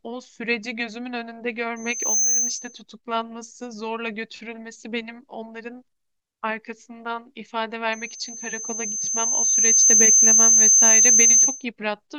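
Loudspeaker feedback squeal at 1.76–2.81 s and 7.93–11.65 s: the microphone re-amplifies a 6.2 kHz tone, which swells over the speech, quickly the first time and slowly the second, drawing a bright horizontal spectrogram line.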